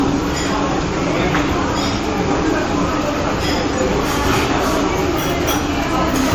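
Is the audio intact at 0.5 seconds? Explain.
No. Generation loss runs through the whole clip, including 0.5 s, and is likely the result of the sound passing through a lossy encoder around five times, with artefacts consistent with AAC-LC at about 96 kbit/s. Each pass requantises on a shifted frame grid, so noise and spectral holes pile up. At 0.5 s this is heard as a swirly, hollow, smeared texture with blurred attacks, worse than a single encode at that rate would give.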